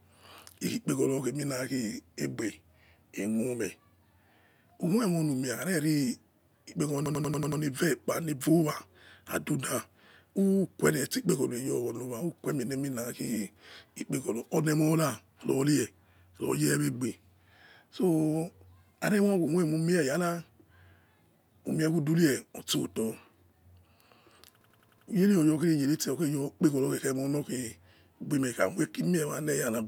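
At 7.06 to 7.62 s and again at 24.61 to 25.08 s there's a system hang loop: the system stalled while the sound hardware kept replaying a 93 ms slice of its ring buffer, likely a 4096-sample buffer. You get a machine-gun stutter at about 10.8 Hz.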